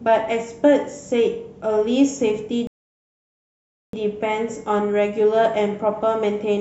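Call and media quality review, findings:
Rebuffering stall, playback client: buffer ran dry mid-stream, player halted awaiting more data. Speech drops to silence 2.67–3.93 s, then resumes exactly where it stopped. No content lost; 1.26 s of dead air added to timeline.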